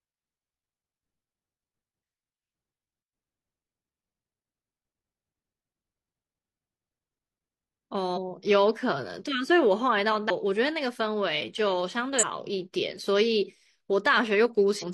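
At 8.13, 10.26, 12.18 and 14.78 s, compressed frames are skipped: speech jumps ahead about 0.3, 0.7, 0.15 and 0.15 s, each join visible as an abrupt spectrogram discontinuity.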